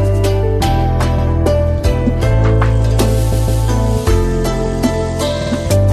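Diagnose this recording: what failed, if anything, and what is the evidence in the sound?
Repeated frames at 1.18, 3.32 and 5.41 s: coded blocks of 78, 157 and 52 ms replay, so the sound stutters, a fault in storing or sending the compressed stream.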